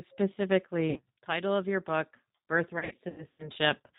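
G.729 codec damage runs through this whole speech recording: the narrow band that stops at 4 kHz and the rough, slightly synthetic texture point to an 8 kbit/s G.729A coder rebuilding the voice from a vocal tract filter, pitch predictor and a few pulses per frame. VoIP packet loss concealed by the speech codec appears at 0.90 to 1.02 s, just before "title of your book", where about 60 ms of missing audio, consistent with two lost packets, is bridged by an extrapolation that fades. A longer stretch from 2.79 to 3.50 s has roughly 270 ms lost in scattered gaps over 600 ms, the longest about 90 ms. Each time the decoder repeats its last pitch and filter at falling gain, leaving the voice weak or distorted as it recovers.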